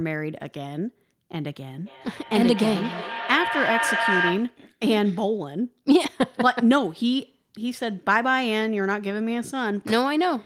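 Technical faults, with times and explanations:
1.86–4.66 s, feedback echo between two devices: a second device replays this microphone's feed, which is picked up again, so the speech returns about every third of a second, peaking about 1 dB below the speech.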